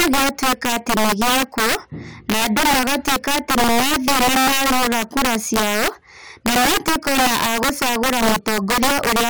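Integer overflow throughout: gain about 7 dB too high makes louder speech peaks wrap to the opposite sign, giving violent cracks sharper than clipping.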